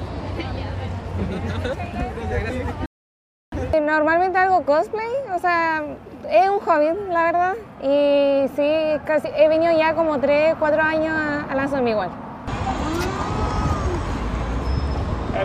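The audio has a rebuffering stall from 2.86 s to 3.52 s: playback drained its downloaded data, went silent, and waited for more to arrive. When it restarts, the sound picks up exactly where it left off, so nothing is skipped but about 0.66 s of extra time is inserted. On a waveform this shows as a flat silent gap; a spectrogram shows a clean vertical blank band across all frequencies, with matching content on either side.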